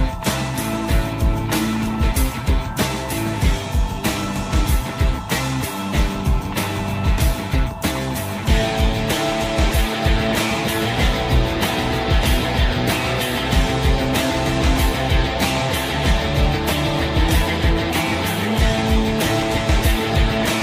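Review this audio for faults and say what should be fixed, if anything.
No faults found; nothing to fix.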